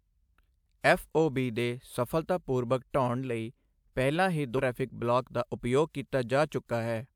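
A run of compressed frames never reached the output of this speech recording, either missing from the file or rejected by the decoder, so compressed frames were skipped at 4.56 to 4.60 s, between "ਢਹਾਉਣ ਲਈ ਪਹਿਲਾਂ ਹੀ" and "ਬਲਾਕ ਦਾ ਉਪਯੋਗ". Roughly four 42.7 ms frames, around 150 ms of audio, vanish, and the audio jumps ahead at the join.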